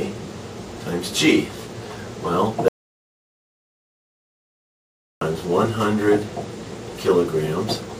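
At 2.68 s the sound cuts out completely. It returns at 5.21 s. This is an audio dropout to silence, lasting about 2.53 s. The gap holds silence, with no room tone. The input was likely lost while recording continued. Anything during that stretch is gone.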